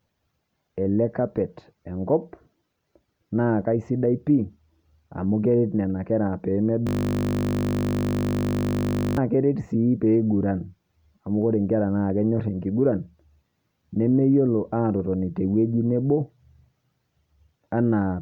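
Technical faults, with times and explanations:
6.87–9.17 s, system hang loop: the playback froze and kept recycling one 20 ms chunk, so you get a steady 50 Hz buzz until "keret sii" picks up.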